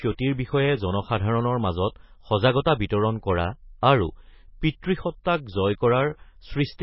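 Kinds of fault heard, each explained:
MP3 compression: Heavy watery, swirling texture with no treble above 5.6 kHz, likely from MP3 encoding at a bitrate near 18 kbps, which drops weak frequency lines frame by frame. A spectrogram shows a flat ceiling at 5.6 kHz and flickering gaps beneath it.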